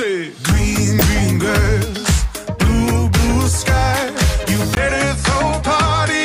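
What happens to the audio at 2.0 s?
Nothing goes wrong at 2.0 s; the audio plays through that moment intact, with no dropout, click or other fault.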